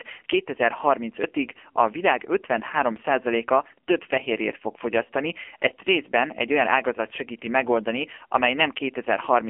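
Throughout, the speech was squeezed through a low-rate AMR narrowband mobile codec, which fits about 6.7 kbps, cutting everything above 3.5 kHz and leaving it heavily buzzy and synthetic.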